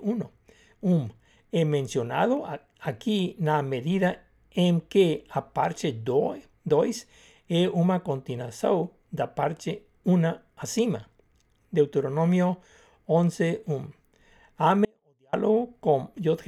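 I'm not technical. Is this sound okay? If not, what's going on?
No. Near the end, the speech signal was briefly lost somewhere along the way, likely a momentary break in the connection, while the rest of the chain stayed switched on. This is an audio dropout to a faint residue. From 14.85 to 15.33 seconds, roughly half a second, the speech suddenly drops to a very faint trace of sound, then snaps straight back. It is abrupt, not a natural pause or a gentle fade.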